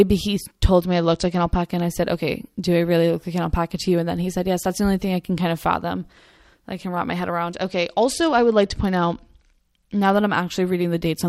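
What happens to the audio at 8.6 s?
A Bluetooth SBC bit pool drop runs from 7.55 s to 10.17 s, just after "wrap my head around", so 8.6 s falls inside it. Under link pressure, the encoder gives each frame fewer bits, which fits a bit pool falling from 28 to 10, near 84 kbps. The highest sub-bands are starved and the rest are coarsely quantised, so the speech goes dull in the treble and a gritty noise rises until the rate recovers.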